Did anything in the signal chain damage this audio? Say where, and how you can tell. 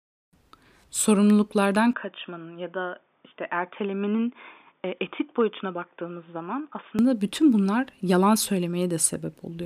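Yes, at the capture end, most likely an input switched to a poorer device. From 1.93 s to 6.99 s the speech turns dull with nothing above 3.6 kHz, drops a few dB, and gains a new noise floor roughly 50 dB down, with no gap at either switch.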